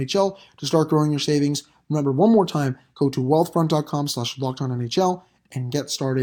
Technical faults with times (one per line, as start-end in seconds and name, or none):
none